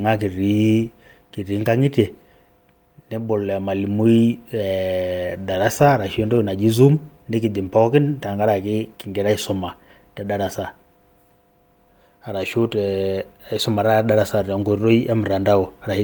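A short speech recording, and honestly there's nothing technically wrong to point at anywhere in it.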